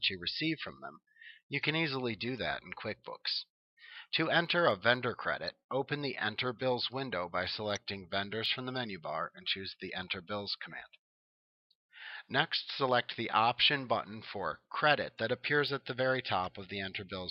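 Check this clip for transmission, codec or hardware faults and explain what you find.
No faults detected.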